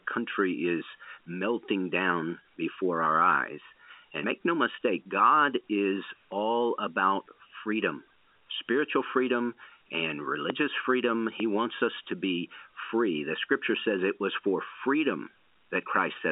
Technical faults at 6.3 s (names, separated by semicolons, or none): channel delay (comb filtering); dropped buffer (overrun)